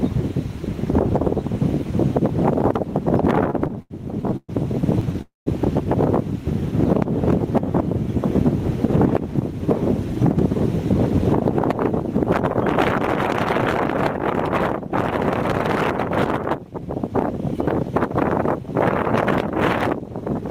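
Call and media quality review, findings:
Repeated stalls (stutter), 3.43–5.15 s: audio drags and catches about a dozen times, longest hold near 120 ms, roughly 320 ms filled in total with nothing lost. Jitter buffer repeatedly underran and the receiver stretched the last sound. Spectrogram shows smeared, repeated frames; waveform shows looping cycles.

Call audio freeze, 5.21–5.48 s: sound hangs about 250 ms, trails into about 150 ms of silence, then resumes where it stopped with nothing skipped. Likely a network hold-up emptying the jitter buffer. Waveform shows a decaying tail into a flat line; spectrogram shows horizontal streaks fading to blank.

Jitter buffer speed-up, 16.58–18.67 s: audio runs about 3% fast at unchanged pitch. Receiver trimmed short pitch-period slices, around 70 ms in total, to shed excess buffered delay. Spectrogram shows compressed timing with harmonics unshifted; waveform shows subtle splice points.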